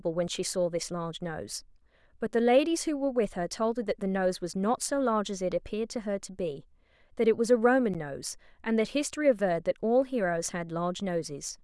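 At 7.94 s a brief tick cuts into the speech: a block of digital silence, about 11 ms long, likely from a 256-sample buffer left unfilled in time.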